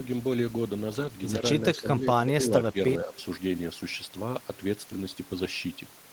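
At 1.75 to 1.79 s there is a brief echo leak, likely from a far end playing the call over a loudspeaker whose echo canceller let part of its microphone pickup return down the line. The result is a faint scrap of the speech repeated about 106 ms late, sitting roughly 25 dB beneath the direct voice, a short ghost rather than a distinct repeat.

Directly after, from 1.8 to 2.54 s, comes speech suppressed in double talk, likely because the echo canceller could not tell the talker apart from loudspeaker echo while both sides spoke, and so pulled everything down. Within that span, around 0.4 s of speech sags by as much as roughly 15 dB, so the voice seems to duck away. Two shorter dips of the same kind follow: at 2.72 to 2.77 s the level drops by about 10 dB, and at 3.05 to 3.14 s by a milder 5 dB or so, each a quick flicker in loudness.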